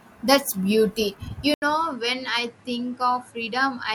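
At 1.54 s the input likely switched to a poorer device: after an 80 ms silence, the speech comes back narrower, with nothing above 11.4 kHz, around ten decibels quieter, and carrying new background noise.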